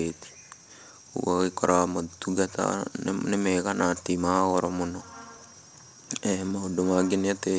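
Throughout the clip there is clock drift between sender and receiver. The sender's audio clock runs about 2% slower than the receiver's, so the jitter buffer keeps draining. The speech arrives a little too slowly for playback, and it carries small, unevenly spaced timing hiccups from start to finish.

From 0.14 s to 7.18 s the receiver makes repeated timing corrections to keep its buffer from running dry. It duplicates short fragments, so playback runs at 98% speed and grows by about a tenth of a second over that stretch. This is heard as faint stutters and a slightly dragging tempo. The G.722 call path leaves nothing above 8 kHz.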